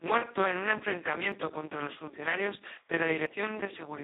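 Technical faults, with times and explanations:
Throughout: Speex codec. The speech is confined to a telephone-like band of about 300 Hz to 3.7 kHz, and nothing at all sits above 3.8 kHz. The damage is heavy: the voice sounds hoarse, buzzy and close to robotic, which fits a very low bitrate of around 2 kbps. At that rate there are too few bits to describe the excitation. On a spectrogram, harmonics look smeared and noisy, and the band stops as a sharp shelf.
1.32 s and 3.26 s: dropped buffer (overrun). Each is a small forward jump in the sound with no gap of silence. About 20 ms is lost at 1.32 s and about 40 ms at 3.26 s. The likely cause is samples being overwritten before the program read them, so the two sides were spliced directly together. The waveform shows an abrupt discontinuity, and the spectrogram shows a thin vertical broadband line where the audio jumps.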